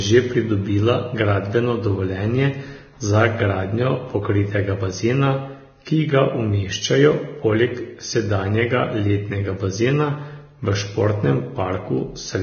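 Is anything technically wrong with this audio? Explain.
Yes. Throughout, the speech cuts off at 6.5 kHz and its treble sounds hissy and grainy, with blurred consonant onsets. This is likely Vorbis compression at a very low bitrate near 18 kbps. Coarsely quantised residue turns fine detail into noise, so a spectrogram shows a flat ceiling with speckled energy beneath it.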